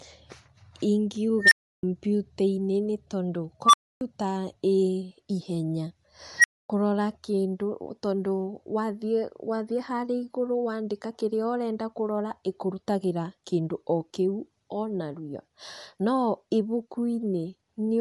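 Throughout the speech, nothing sounds above 11.6 kHz and the top band has a grainy, breathy fill rather than plain dullness. That points to Bluetooth LC3 compression as the likely cause, fitting roughly 48 kbps. An unstable filter then fires three times: at 1.41–1.83 s a roughly 2 kHz squeal swells within about 0.1 s and clips, and at 3.64–4.01 s a roughly 1 kHz squeal does the same in about 0.09 s. At 6.38–6.70 s a roughly 2 kHz squeal swells in about 0.06 s. Each squeal is followed by a dead silence of about 0.26–0.32 s. Unlike acoustic feedback, each one ends in an abrupt cut-out instead of fading.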